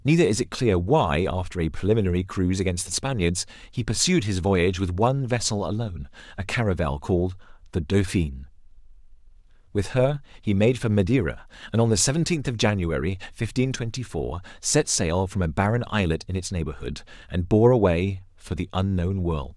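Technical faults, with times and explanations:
No technical faults can be heard in this speech.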